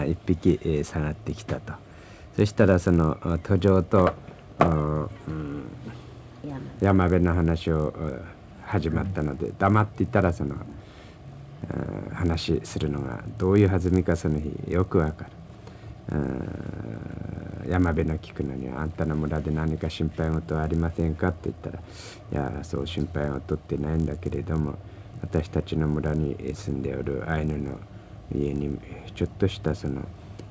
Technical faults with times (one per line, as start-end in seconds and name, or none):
0.00-30.50 resampler restarted on every block